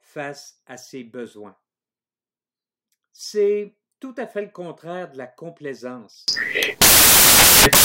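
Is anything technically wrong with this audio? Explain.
Yes. From 6.28 s to the end of the speech at 7.85 s, the sound collapses into loud, harsh broadband noise. This is a case of samples built from the wrong bytes: the bytes making up each sample are assembled incorrectly, whether offset by one, swapped in order or misaligned, so the rapidly changing low-order bits end up as the dominant part of every value.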